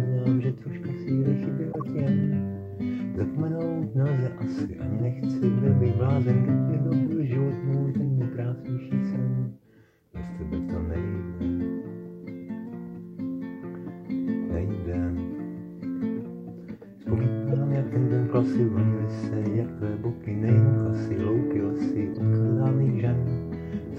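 Short chirps and noise bursts cut through at 1.72 to 1.88 s, 17.53 to 17.55 s and 22.14 to 22.17 s, peaking around -20 dBFS in the first two and -25 dBFS in the last. These are corrupt frames decoded: damaged compressed data was played anyway, misplacing energy across frequencies for each spoiled frame's span.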